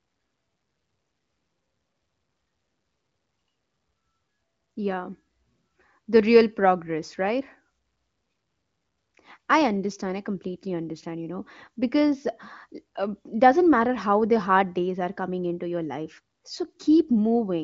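Speech over HD Voice, with no faults heard.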